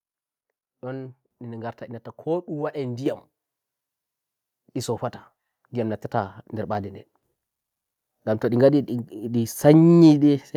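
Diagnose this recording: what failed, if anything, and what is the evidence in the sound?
The failure is a microphone volume stepped up, at the call-processing stage. At 3.06 s the speech and the background noise rise together by about 6 dB in a single step. There is no ramp. Both jump at once, so the change happened before any speech processing could separate them. The call software judged the microphone too quiet. It then raised the device's input gain in one move instead of easing it up.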